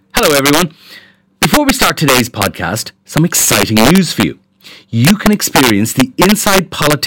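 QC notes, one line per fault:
Throughout, integer overflow: the speech is pushed about 6 dB past full scale, and instead of being held at the ceiling, each peak that goes over wraps around to the opposite extreme. Only a small share of samples, somewhere around one or two percent, cross the limit, so it's the loud moments that snap into harsh, violent cracks. Those are much sharper and nastier than ordinary clipping, because the waveform jumps across the whole range.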